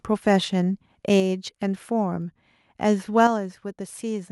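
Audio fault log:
0.27–0.36 s, 1.13–1.17 s, 3.18–3.26 s: microphone overload. Peaks run about 1–2 dB past the converter's limit and flatten into a harsh crackle, likely from excessive input gain. Only loud syllables distort, while the level stays unchanged.
1.20 s, 3.27 s: microphone volume stepped down. Just after a crackling peak, the voice and the background drop together in one abrupt step of about 5 dB and then 6 dB, likely software cutting the input gain. This is not a gradual fade.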